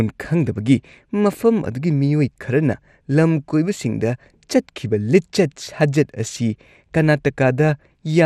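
Throughout, the speech sounds dull and granular, with upper bands flickering. This is MP2 compression, likely from starved sub-band bits, which fits about 80 kbps.

At 3.74 s, DAB burbling briefly erupts. A few bit errors slip past error correction, putting short blips of noise into single sub-bands.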